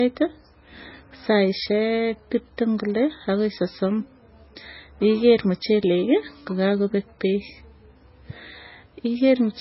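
The whole speech track tops out around 5.5 kHz with smeary artefacts, likely low-bitrate audio saved at a high bitrate: damage that fits a 16 kbit/s MP3, re-encoded around 192 kbit/s.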